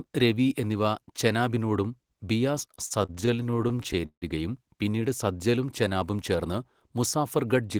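Repeated stalls (stutter) affect this speech recording from 2.75 to 4.24 s, ending just before "പിന്നീട് സത്ലജും ചെനാബും ചേർന്ന്". Packets arrived late, so the jitter buffer kept running dry, and the receiver bridged each of the 22 gaps by extending the last sound. These fills total 442 ms, about 30 percent of that stretch, and the longest is 158 ms. No audio is lost, but the passage drags and stutters. A jitter buffer speed-up follows from 7.37 to 7.76 s. With more audio queued than its target, the receiver cut out roughly 50 ms in small pitch-period-sized pieces. That plays the passage about 10 percent faster without changing the pitch, so it sounds hurried.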